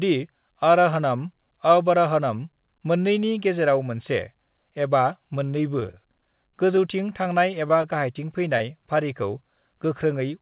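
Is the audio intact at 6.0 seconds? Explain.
No, 6.0 s falls inside repeated packet loss (robotic sound), 5.8 to 6.78 s: lost packets are patched by stretching the preceding speech, sounding choppy with pieces missing, with smeared, repeated slices on a spectrogram.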